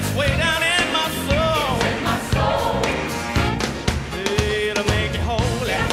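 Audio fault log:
1.62 s to end: crude rate conversion. From 1.62 s a gritty, inharmonic fizz rides on the sound, strongest on loud and high-frequency passages, sitting roughly 35 dB below the signal. The pattern fits a 44.1 to 48 kHz change done by straight-line interpolation between samples with no filtering, so the interpolation error repeats at a rate set by the two rates and leaves shifted, inharmonic copies of the content. Codec artefacts warble and smear instead, but this error follows the signal's level directly.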